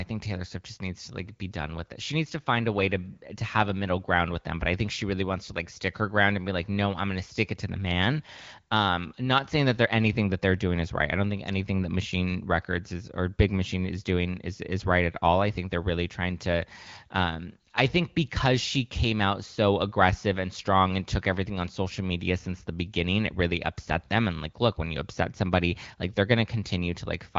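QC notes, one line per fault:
Nothing to flag here: just speech coming through the AMR wideband (HD Voice) codec, with the top end stopping at about 7.5 kHz.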